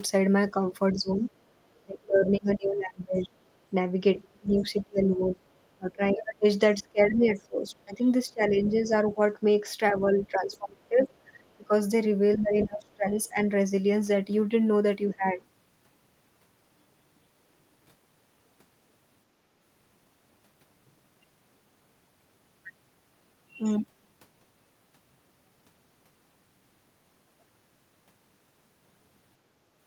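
From 0.7 to 13.4 s the speech dips and thins in pieces, as deep as about 25 dB, for roughly 7 s in all. The likely cause is speech suppressed in double talk: the echo canceller turns the talker down while the far side speaks.

From 0.93 to 7.35 s a second voice sits quietly underneath, around 20 dB below the talker. This is likely the other side's voice leaking through from the loudspeaker. It is a separate voice, not a dip in the talker's own level.

At 1.54 to 1.58 s the room sound drops by about 10 dB for 40 ms. This is background gated by the echo canceller.

Further leakage likely occurs at 10.14 to 10.57 s, around 25 dB down, and at 12.61 to 12.94 s, around 15 dB down.

At 15.08 to 15.41 s the speech briefly dips again by around 10 dB, likely another double-talk suppression.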